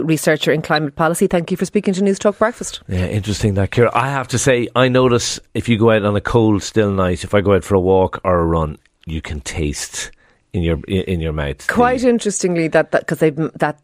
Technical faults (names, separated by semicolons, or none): corrupt frame decoded